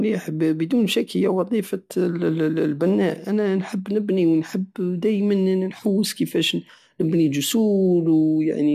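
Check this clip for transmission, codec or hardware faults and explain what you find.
No faults turn up in this clip.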